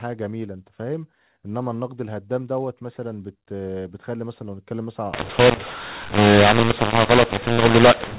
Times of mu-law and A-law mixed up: 5.13-8.19

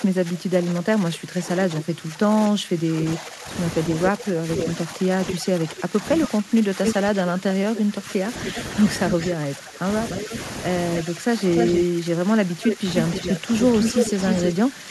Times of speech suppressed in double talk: 0.00-14.91

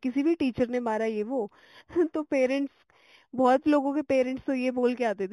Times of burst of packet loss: none

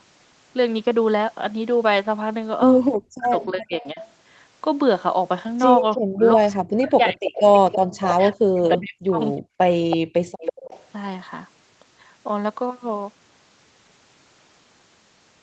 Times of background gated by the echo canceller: 10.05-10.38

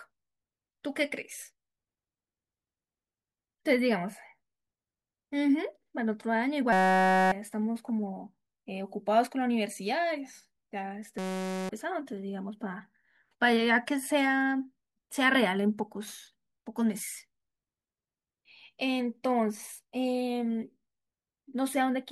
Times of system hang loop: 6.73-7.32, 11.18-11.69

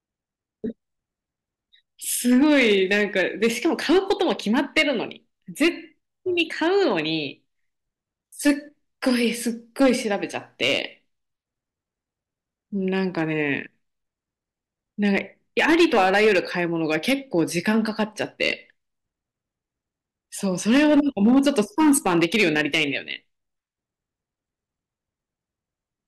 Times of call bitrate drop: none

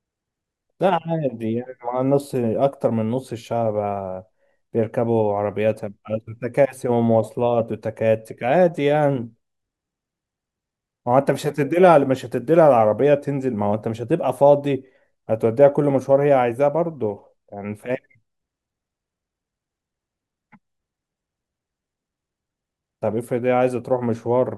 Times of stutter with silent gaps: none

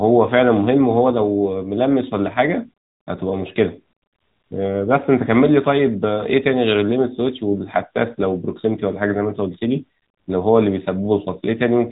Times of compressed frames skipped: none

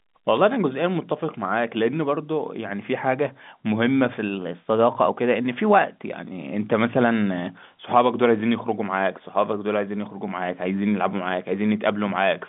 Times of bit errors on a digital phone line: 0.37

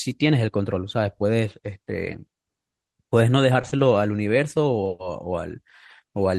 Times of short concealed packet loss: 3.61-3.81

